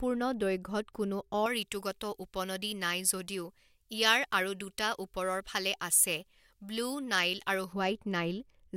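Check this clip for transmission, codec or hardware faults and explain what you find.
There is one fault: pre-emphasis left on. It runs from 1.46 s to 7.73 s of this speech. The treble was boosted before transmission, and the matching cut was never applied at the receiving end. So the lift stays in the signal. At 10 kHz the level sits about 11 dB above 1 kHz, which fits a J.17 emphasis curve. The speech turns thin and over-bright. Sibilants hiss and sound harsh.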